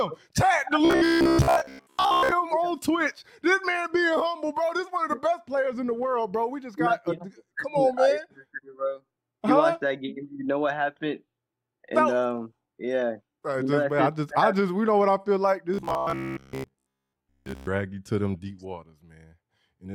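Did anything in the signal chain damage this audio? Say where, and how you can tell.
Yes: robotic sound from repeated short buffers, 0.85–2.32 s and 15.74–17.69 s. The rigid 66.8 Hz buzz suggests a likely starved driver buffer looping 15 ms chunks.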